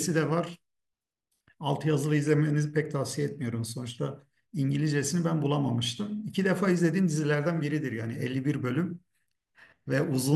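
No technical faults can be heard anywhere here.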